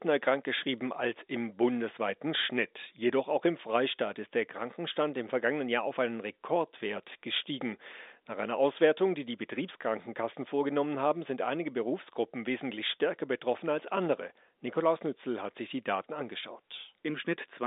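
Nothing goes wrong in this one, just speech on an ordinary telephone line that runs out of top end a little below 3.8 kHz, exactly as that kind of line should.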